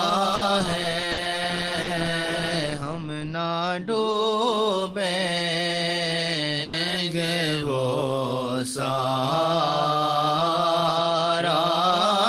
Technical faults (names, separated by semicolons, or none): burst of packet loss; short concealed packet loss